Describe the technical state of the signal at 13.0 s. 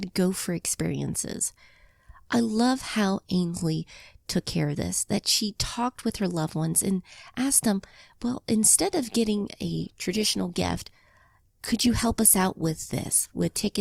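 At 13.0 s the speech sits inside a stretch of adaptive stream at a lower bitrate. It runs from 9.37 s, just after "them well instead of", to the end. The connection likely slowed, so a leaner encoding was served. Codec artefacts rise. The change is abrupt, with no gap, consistent with a drop from roughly 64 to 24 kbit/s.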